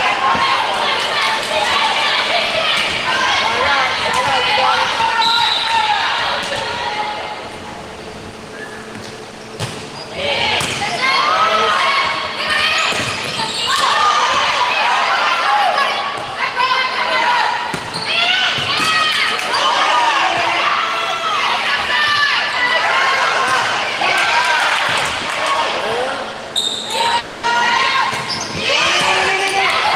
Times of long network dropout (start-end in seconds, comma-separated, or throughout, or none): 27.19-27.45